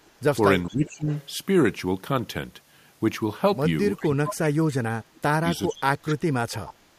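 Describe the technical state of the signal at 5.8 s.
At 5.8 s the talker's speech is being pulled down hard, something like 25 dB at its deepest, across roughly half a second from 5.66 to 6.17 s. That's speech suppressed in double talk: the far side was likely talking at the same moment, and the echo canceller, unable to tell this voice from its own loudspeaker echo, ducked everything. You hear the voice sag and thin out.

Right inside that dip, from 5.76 to 5.82 s, there's a brief echo leak: a faint scrap of voice, something like 25 dB below the speech, arriving 420 ms late. The canceller on the loudspeaker end likely didn't scrub out all of what its mic picked up, so a short, delayed copy slipped back into the line.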